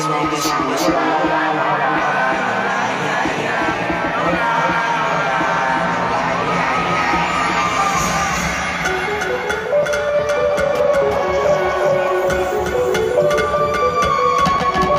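From start to end, a doubled audio track runs: a second full-band copy trails roughly 400 ms behind, about 5 dB quieter. Unlike room echo, it is a single repeat with no decay or tonal colouring, likely from a slower second capture path.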